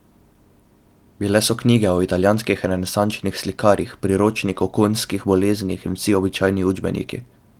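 Nothing stood out as a technical fault on listening to this speech recording.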